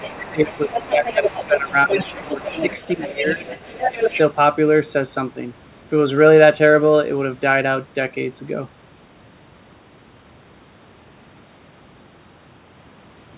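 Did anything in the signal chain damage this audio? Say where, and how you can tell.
Yes. The damage happens at the call-processing stage, in the echo canceller. The speech is pushed down by about 15 dB from 0.00 to 2.65 s, from 2.95 to 3.52 s and from 3.90 to 4.13 s. This is likely speech suppressed in double talk: the far side was talking at the same moment, and the canceller attenuated everything. On a waveform the envelope caves in across those spans. On the spectrogram the harmonics fade and the band up to the 4 kHz ceiling (consistent with a G.711 mu-law call path) goes thin.

The same stage also lets the other side's voice leak through from 0.00 to 4.21 s. A second, weaker voice sits about 10 dB under the main speech. It probably comes from the loudspeaker feeding back into the microphone, and the canceller did not remove all of it. On the spectrogram it shows as a faint, independent set of harmonic striations that don't track the main voice's pitch.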